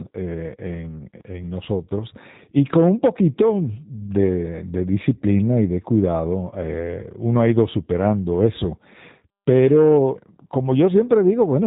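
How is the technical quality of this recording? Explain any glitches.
The recording has clear codec damage throughout and one brief dropout.

The G.729 codec affects the whole clip. The speech is rebuilt from a vocal-tract filter, a pitch predictor and a few pulses per frame, so it sounds slightly rough and synthetic. Everything above 4 kHz is gone, and the quality fits an 8 kbit/s codec.

From 6.51 to 6.55 s, between "disciplina y de cuidado" and "eh uno ha ido", there is VoIP packet loss concealed by the speech codec. The decoder stretches its last pitch and filter into a brief fading patch, and the speech stays weak or distorted for tens of milliseconds or more while it recovers. The gap fits a single lost 10 ms frame.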